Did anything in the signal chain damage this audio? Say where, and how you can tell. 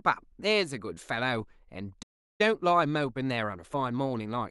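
Yes. At 2.02 s the speech stops dead in mid-flow and the output stays silent until 2.41 s, a gap of about 0.37 s. This points to the playback stage, most likely a playback stall: the player's buffer ran dry or its output thread was blocked, so nothing reached the converter until it recovered.

Right after the gap, from 2.41 s to 4.41 s, the speech runs hurried, at about 1.15 times normal speed, yet its pitch stays where it was. That is time-compressed catch-up, also at the playback stage. To clear the backlog built up during the stall, the player removes short slices of audio and cross-fades across the joins, shortening the timeline without resampling.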